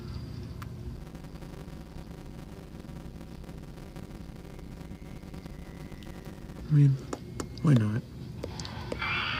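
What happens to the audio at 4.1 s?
At 4.1 s you're in the middle of a block size mismatch (padded), running from about 0.96 to 6.61 s. Each block comes up short and gets zero-filled, so a 100 Hz buzz rides on the sound, which plays at 0.533 speed with its pitch roughly unchanged, which fits 256-sample writes.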